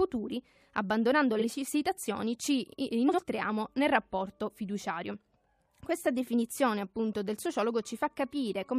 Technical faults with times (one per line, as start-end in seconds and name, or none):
1.39-1.45 frames out of order
3.08-3.19 frames out of order